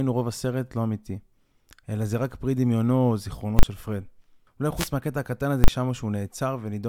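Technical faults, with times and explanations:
3.59–3.63 s, invalid numbers at full scale: a 40 ms block of infinite or invalid values pins the output at one extreme value, giving one loud bang. On the waveform it is a flat slab at one extreme value, far beyond the speech peaks, and on the spectrogram a bright broadband vertical stripe.
4.75–4.90 s, wireless microphone noise hit: the FM radio link fades as reflections cancel, and receiver noise rises over the speech as a short swish of static. This shows as a diffuse haze spread across high frequencies on the spectrogram, with a fuzzy, thickened waveform.
5.64–5.68 s, invalid numbers at full scale: another 40 ms block of invalid values held at one extreme value, heard as a single bang. It appears as a flat block at one extreme value on the waveform and a broadband spectrogram stripe.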